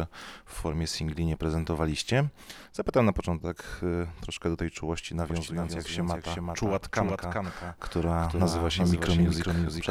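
From 5.3 s to the end, the audio carries a doubled audio track: a second, full-band copy of the same sound trails the original by roughly 0.4 s, sitting about 5 dB below it. The copy has no decay tail or room colouring, and it cuts in abruptly at 5.3 s. The likely cause is the same source reaching the mix a second time through a slower capture path, or an edit leaving two out-of-step copies stacked.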